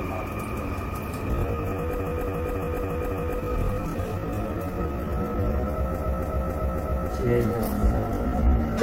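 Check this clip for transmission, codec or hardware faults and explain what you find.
Two faults are present: a time-stretched section and two bursts of repeated frames.

Time-stretched section, 1.27 s to the end at 8.83 s: the pace drops abruptly to about 0.59 times normal speed while pitch holds. The likely cause is software stretching the audio by repeating short pieces, leaving the slowed sound dragging.

Repeated frames, 1.98 to 3.37 s and 5.97 to 7.08 s: a 278.6 ms block replays five times, then four times, adding 1.39 s and 1.11 s. This points to a run of compressed frames, consistent with about six frames, being resent, heard as a stutter.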